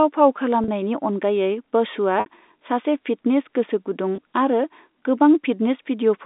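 Packet loss with pitch repetition occurs at 0.64–0.68 s, just before "अनगायै बसुआ सासे", at 2.20–2.26 s, just after "अनगायै बसुआ", and at 4.16–4.18 s. Audio went missing for 40, 60 and 20 ms, which fits losses of 20 ms packets. The receiver covered each gap by looping the last pitch period of the speech. The 40 and 20 ms gaps sound like a brief, slightly buzzy held tone over the telephone-band G.711 line. The 60 ms gap fades into silence before the speech returns with a short cross-fade.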